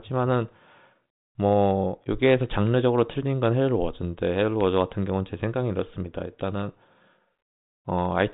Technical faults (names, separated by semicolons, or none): none